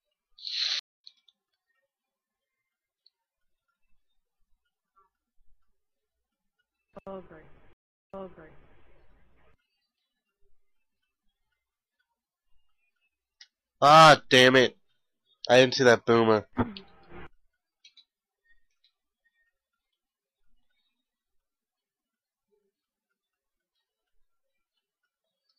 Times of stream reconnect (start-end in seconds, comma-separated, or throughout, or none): 0.79-1.04, 7.73-8.80